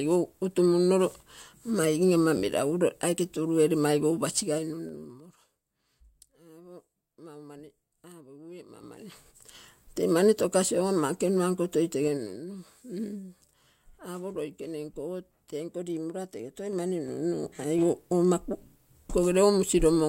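A ticking, zipping texture rides on the speech from 4.35 to 5.46 s, from 12.03 to 12.37 s, and from 16.56 to 17.84 s after "tenko limorona tege". This is zipper noise: the level moves in unsmoothed 3 dB steps, each one clicking. The level falls roughly 20 dB, then 10 dB, and finally rises 10 dB.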